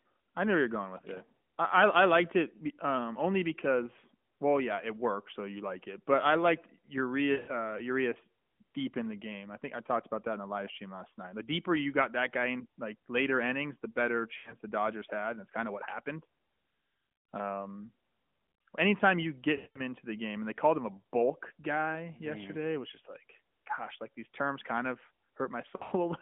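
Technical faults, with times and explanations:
7.32–7.64 s, 14.38–14.54 s (after "later innings the better"), 19.56–19.81 s (between "anytime you get" and "into the game and"), 25.76–25.93 s: lost AMR speech frames. Each gap covers 80 to 200 ms of speech, scattered in the first and last events. The decoder repeats its last pitch and vocal-tract settings at falling gain, so the speech smears, then fades before recovering roughly. On a spectrogram, harmonics flatten into stretched, dimming bands within the 200–3400 Hz narrowband line, and the waveform envelope sags.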